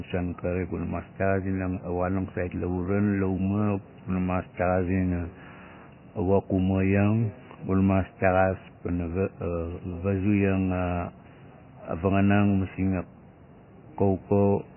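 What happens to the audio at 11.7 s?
At 11.7 s the speech sounds dull and watery, as it does for the whole clip: there is nothing above 3 kHz, and the remaining sound swirls, with s sounds turning metallic and chirpy. The likely cause is heavy MP3 compression, at a bitrate that points to something as low as 16 kbps. Starved of bits, the encoder drops the treble and lets weak frequency lines flicker on and off between frames. A plain low-pass filter would cut the treble without that swirl.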